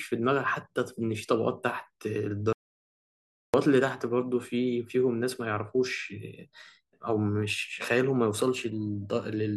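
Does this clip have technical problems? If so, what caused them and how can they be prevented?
Yes. An audio dropout to silence cuts out the speech from 2.53 to 3.54 s. Unlike a pause or a noise gate, the gap is silent with no room tone, likely from a lost input connection. Securing cables and monitoring the input while recording prevents it.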